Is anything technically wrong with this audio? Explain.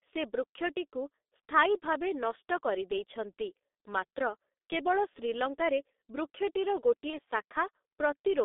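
Yes, two things. The whole clip has gone through the G.723.1 codec, and heavily. The band sits between about 250 Hz and 3.7 kHz, and the low-rate model, which fits roughly 6.3 kbit/s, redraws its picture of the voice only every 30 ms, so the speech comes out muffled and hoarse with smeared consonants.

There's also VoIP packet loss concealed by the speech codec, at 1.25 to 1.28 s and 7.10 to 7.21 s. In each spot about 30 ms of audio went missing, and the decoder filled it by stretching its last pitch and filter at falling gain. You hear a brief fading smear, and at 7.1 s it lingers a bit longer while the decoder recovers.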